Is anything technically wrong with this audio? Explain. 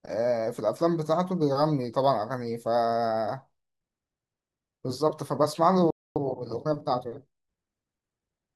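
Yes. The speech clip has two linked faults.

At 5.90 s a playback stall sets in, lasting about a quarter of a second until 6.16 s. The player most likely ran out of buffered data or had its output thread held up, so the speech cuts to silence mid-flow and then resumes.

From 6.16 s to 8.42 s there is time-compressed catch-up. To clear the backlog left by the stall, the player drops short slices and cross-fades across the joins, running about 1.1 times normal speed. The speech sounds hurried at unchanged pitch.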